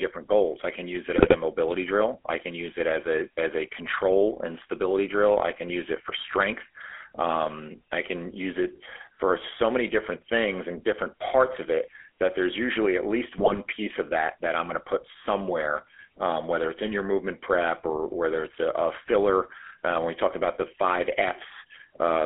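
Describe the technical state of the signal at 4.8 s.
At 4.8 s the speech carries GSM full-rate codec damage, present throughout the clip. The codec rebuilds the voice from a vocal-tract model driven by sparse pulses. It sounds plainly buzzy and gravelly. A spectrogram shows a telephone band of roughly 300 Hz to 3.4 kHz, nothing above 4 kHz.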